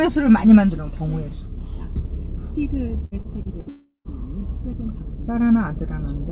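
A recording of everyday sounds, carried over a call link whose band stops at 4 kHz, which fits G.711 A-law at 64 kbps. From 3.05 to 3.69 s, packets went missing again and again: four separate gaps, the longest about 65 ms, with roughly a quarter of that stretch patched by repeating the preceding audio. This repeated packet loss gives a choppy, robotic texture with small pieces gone. Immediately after, from 3.69 to 4.08 s, the likely cause is a long network dropout in which no audio arrived for about 0.39 s. The receiver stretches the last sound into a fading buzz or hiss, and the final 0.13 s or so falls to silence before the audio resumes at 4.08 s, with the missing portion never heard.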